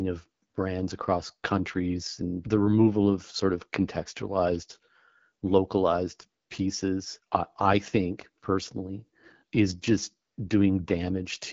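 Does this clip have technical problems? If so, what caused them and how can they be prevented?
Yes. Throughout, AMR wideband (HD Voice) coding makes the speech rough and raspy, which fits the low 8.85 kbit/s mode. A spectrogram shows nothing above 7.6 kHz. To prevent it, use 12.65 kbit/s or higher.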